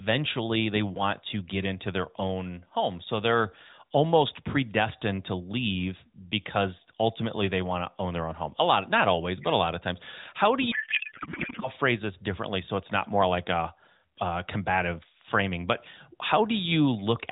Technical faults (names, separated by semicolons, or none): codec payload misread